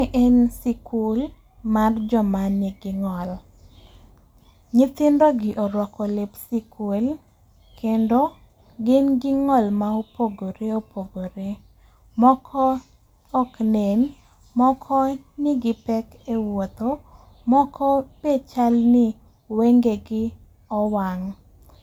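Nothing in this speech recording stood out as a technical fault on listening.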